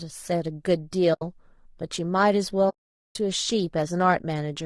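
Low-delay AAC compression runs through the whole speech clip. The voice sounds rough and grainy, with noise filling the gaps between pitch harmonics and a thin, synthetic-sounding top band. This is likely from AAC-ELD's short frames, which fits a bitrate around 32 kbps that leaves too few bits to resolve harmonics cleanly.

AAC frame loss with muting occurs from 1.13 to 1.22 s and again from 2.69 to 3.16 s. The lost frames were decoded as silence, so the overlapping windows fade the sound out and back in, leaving soft-edged holes of about 80 ms and 460 ms.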